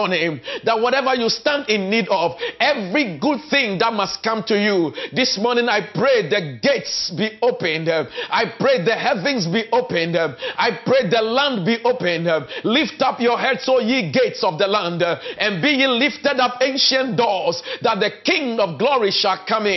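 Nothing is technically wrong with the clip.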